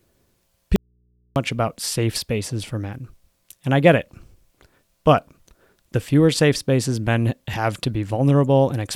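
At 0.76 s the speech drops out abruptly and doesn't come back until 1.36 s, just before "about safe spaces for". That's an audio dropout to a faint residue: for about 0.6 s the gap holds only a low mains hum sitting roughly 45 dB under the speech level. The cut is sudden at both ends, not a pause or a fade. The likely cause is the signal feed breaking while the input downstream stayed live and picked up hum.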